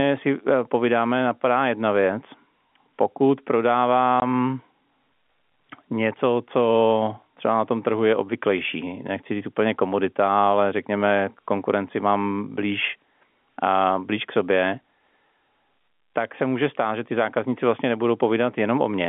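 At 4.2 s there is a single packet loss filled with silence: a 20 ms hole where one packet went missing and the receiver inserted nothing. The gap has abrupt edges within the telephone-band speech, which is limited to roughly 200 Hz to 3.5 kHz.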